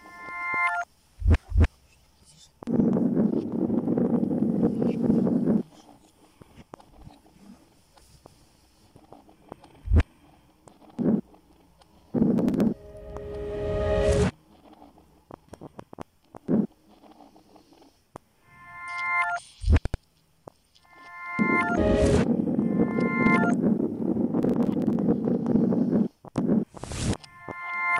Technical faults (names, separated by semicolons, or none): processor overload crackle